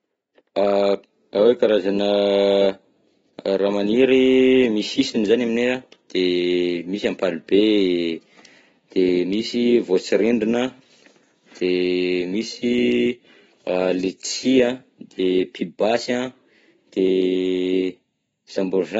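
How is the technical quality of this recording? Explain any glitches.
The speech is audibly degraded throughout. Across the whole recording it sounds dull and smeared, with nothing above 7.6 kHz and fizzy sibilants. AAC compression is the likely cause, at a bitrate that fits roughly 24 kbps, which discards the top band and coarsely quantises what remains.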